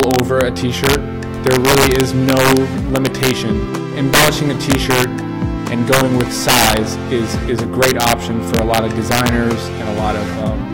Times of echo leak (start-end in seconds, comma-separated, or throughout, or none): none